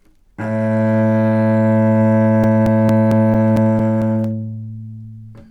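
A scratch on the disc wipes out more data than the player's error correction can rebuild, and the same damaged spot comes round once per revolution. From 2.21 s to 4.24 s, CD scratch ticks interrupt the sound about five times a second, ten in all, as the player patches or mutes each unreadable stretch. Each is a small sharp click or tiny gap lasting up to about 7 ms, recurring in a steady rhythm.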